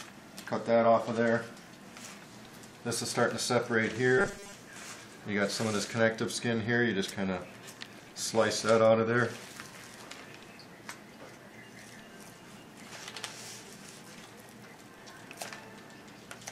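From 4.18 to 4.53 s the sound turns into a rigid, metallic buzz fixed at 200 Hz: robotic sound from repeated short buffers. The likely cause is starved input, with a roughly 5 ms block looped in place of missing audio for most of that span.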